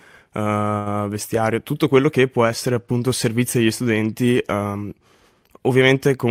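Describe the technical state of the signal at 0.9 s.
At 0.9 s the speech has just left a short stall from a late packet (0.78 to 0.88 s): the empty jitter buffer held the last sound about 78 ms, appearing as flat, repeated spectrogram bands, then resumed intact.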